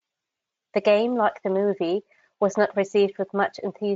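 No audible faults in this speech clip.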